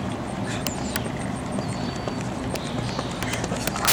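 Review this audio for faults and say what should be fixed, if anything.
Integer overflow cracks through the loud passages at 0.67–0.96 s and from 3.23 s to the end. A single sharp crack hits at 2.56 s. Peaks overran the integer range by about 13 dB, 2 dB and 12 dB and wrapped to the opposite sign instead of being held at full scale. Prevent it with saturating arithmetic or a limiter ahead of the integer stage.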